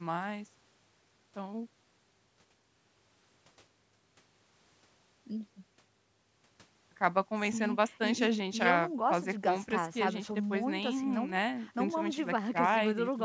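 Nothing goes wrong in this speech, which simply carries the usual shape of a call microphone's processing, with the lowest bass trimmed away and nothing above 8 kHz.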